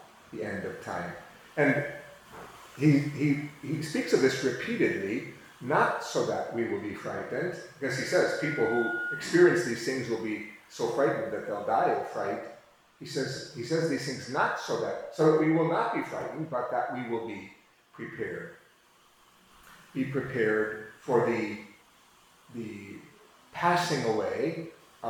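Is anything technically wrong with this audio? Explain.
Yes, there's a loudspeaker feedback squeal from 8.05 to 9.41 s. A mic is catching its own speaker, and at 1.4 kHz the loop gain tops one, so that tone feeds itself. You hear it swell over under a second into a steady whistle, sitting just below the main sound.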